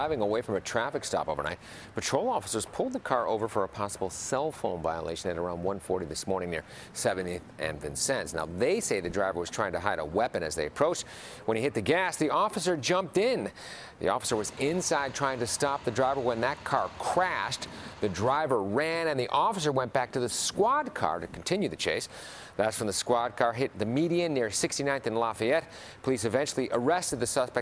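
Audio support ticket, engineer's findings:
No audible faults found.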